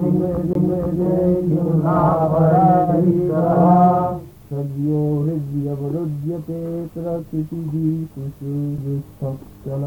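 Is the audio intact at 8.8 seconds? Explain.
No. At 8.78 s there is a CD skip: a knock or disc flaw threw the laser onto another turn of the spiral, so playback mutes for roughly a couple of milliseconds, ticks, and resumes from a different point. What sets it apart from a plain dropout or digital click is that the sound does not pick up where it stopped. It jumps forward or back by a whole number of disc revolutions.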